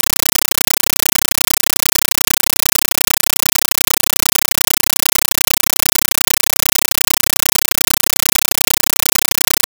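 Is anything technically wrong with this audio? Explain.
Yes. A compressed stream is being played as audio for the whole clip. A Dolby Digital (AC-3) bitstream has been passed through as if it were ordinary samples, with no decoding. Each coded frame arrives as a burst of noise about 9.33 ms long, then zero padding. The bursts repeat 31.25 times a second. The burst length fits a 448 kbps stream. What you hear is very loud, chattering static in place of any real sound.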